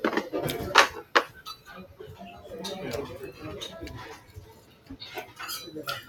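A noise suppressor applied to music or sounds runs through the whole clip of sounds. Built for speech, it treats steady tones and decaying tails as noise and turns them down, so the level swings by around 15 dB while sudden onsets pass. Sound cut by the noise suppressor is clearest at 1.03–1.7 s, 1.86–2.02 s and 4.16–4.94 s, where sustained or fading sound sinks by up to about 10 dB, about 9 dB and about 10 dB respectively.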